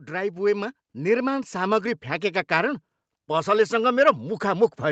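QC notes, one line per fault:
0.08–2.5 s, automatic gain rising: the gain control judged the input too quiet and eased it up about 6 dB, so voice and background swell together before "कारण पसलसँग".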